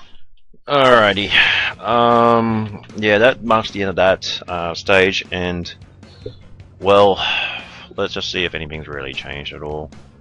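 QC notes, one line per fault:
No faults heard anywhere in this clip.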